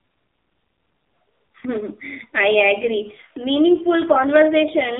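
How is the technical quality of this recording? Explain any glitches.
Poor, with heavy phone-codec damage from start to end. The speech is buzzy, synthetic and thin, with nothing below 250 Hz or above 3.7 kHz. That points to the AMR narrowband mobile codec at a low bitrate, around 6 kbps.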